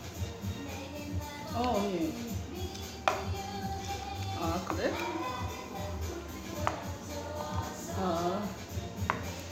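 Everyday sounds, with no technical faults to report.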